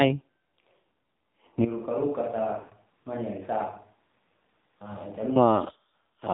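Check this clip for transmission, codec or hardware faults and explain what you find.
Three faults are present: narrowband mobile coding throughout, lost AMR speech frames at three points, and a likely switch to a distant microphone.

AMR narrowband mobile codec, whole clip. The speech is modelled as vocal-tract filtering of sparse pulses. Nothing above 4 kHz survives. The buzzy, synthetic tone fits a low rate near 7.4 kbps.

Lost AMR speech frames, at 0.81 to 0.85 s, 2.60 to 2.74 s and 5.72 to 5.76 s. Corrupted frames are bridged by repeating the last good settings at falling gain. The result is brief warbles and fades. The longest and most drawn-out one is at 2.60 s.

Switch to a distant microphone, 1.65 to 5.36 s. The speech abruptly turns hollow and roomy. It drops roughly 10 dB, with room noise audible underneath, and returns just as suddenly. The likely cause is a farther microphone standing in for the close one.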